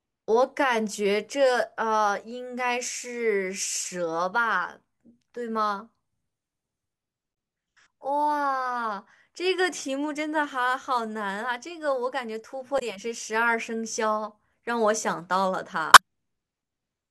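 At 7.31–7.33 s, 12.76–12.82 s and 15.93–15.99 s, damaged data in the compressed stream makes the decoder misread frames and lose sync until it finds the next header, producing a short glitch in the speech; the last also adds about 2 ms.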